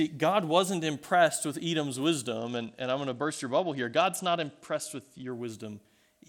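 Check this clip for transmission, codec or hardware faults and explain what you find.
One fault is present: from 2.37 s to 5.31 s the speech turns dull and muffled, its treble largely gone, with a gritty, grainy noise riding on it until the brightness returns. This is a Bluetooth SBC bit pool drop. The congested link forced the encoder to spend far fewer bits per frame, consistent with a fall from a bit pool of 28 to about 11, near 90 kbps. The upper sub-bands were starved and the remaining bands coarsely quantised.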